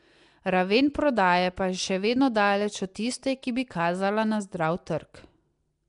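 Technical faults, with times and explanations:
Throughout: Nellymoser compression. The speech carries a rough, hissy halo and a smeared, underwater quality, and nothing is present above about 10.6 kHz. The likely cause is the Nellymoser Asao codec once used for Flash microphone input, at a rate that points to around 44 kbps. It codes short blocks with a fixed, small bit budget, so weak bands receive no bits and are filled with noise, producing the hiss and smearing.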